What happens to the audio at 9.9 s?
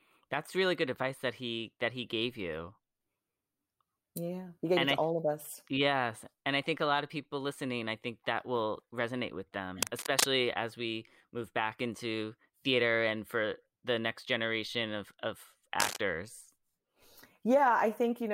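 A worn cable or connector was likely shifted at that moment, its contact resistance jumping about as it moved and injecting cable scratch noise into the signal. From 9.81 to 10.24 s, just after "that will resonate with" and before "as we move back", dense, irregular bursts of scratching and rustling sit over the speech at roughly the same loudness as the speech itself.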